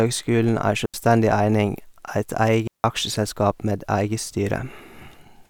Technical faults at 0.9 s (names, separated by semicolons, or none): digital wireless dropout